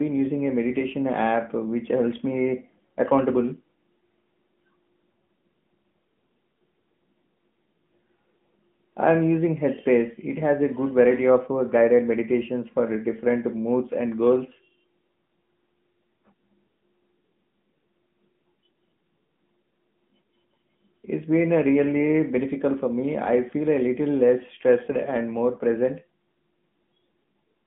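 Throughout, the speech carries AMR narrowband mobile codec damage: the spectrogram stops dead near 3.5 kHz, and coarse vocal-tract modelling leaves a plainly audible buzzy, synthetic edge.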